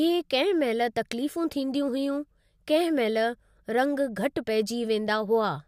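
Listening to the speech in this recording, nothing stood out as a technical problem at any point.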